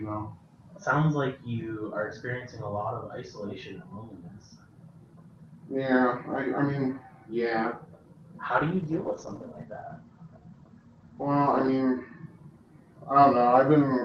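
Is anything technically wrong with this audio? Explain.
Yes, there's a call bitrate drop from 8.57 s to 12.32 s. The bandwidth estimate fell, so the Opus encoder starved the audio, which fits a dip from about 32 to 15 kbps. The top end narrows from 12 kHz to 8 kHz, and the sound goes coarse and muffled until it recovers.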